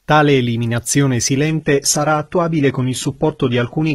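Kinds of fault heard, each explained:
Adaptive stream at a lower bitrate: at 1.48 s the speech switches abruptly, with no gap, to a coarser version that lasts to the end, as the player stepped down to a cheaper stream when the connection slowed. Nothing above 11.8 kHz remains, which fits a very low-bitrate HE-AAC stream near 16 kbit/s. Unlike a dropout or a fixed filter, timing stays intact and quality changes in one sudden step.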